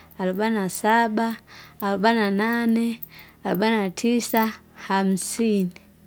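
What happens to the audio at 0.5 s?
Nothing goes wrong at 0.5 s: the speech runs through that point intact, with no dropout, click or distortion.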